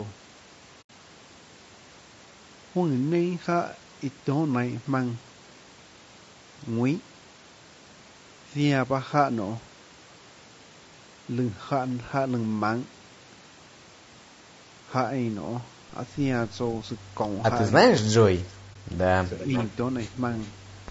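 The speech throughout is rough and grainy, with noise between harmonics and a thin top band, most likely low-delay AAC compression (AAC-ELD) at a low bitrate, which fits about 32 kb/s. AAC frame loss with muting leaves a soft-edged hole of 80 ms from 0.81 to 0.90 s, consistent with four lost frames, and a brief 20 ms dip from 18.73 to 18.76 s. An echo leak, likely from a far-end loudspeaker whose echo canceller let sound through, returns a delayed copy about 0.4 s behind the speech. It comes back around 40 dB down at 18.49–18.53 s, and much stronger, about 15 dB below the speech, at 19.37–19.67 s.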